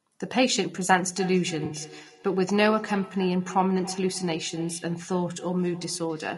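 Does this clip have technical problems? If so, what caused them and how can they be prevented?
Yes. Throughout, the speech sounds rough and grainy with a dull, synthetic top, likely low-delay AAC compression (AAC-ELD) at something like 32 kbps. Giving the encoder a higher bitrate would prevent this.

From 0.98 s to the end there's feedback echo between two devices: the sound comes back roughly every 300 ms, peaking about 16 dB below the speech. Muting one device's speaker or microphone, or having only one device join per room, prevents this.

At 1.65 to 1.75 s there's AAC frame loss with concealment. The decoder filled about 60 ms, which fits three lost frames, leaving a smeared, noisy patch. A steadier network connection or forward error correction would prevent this.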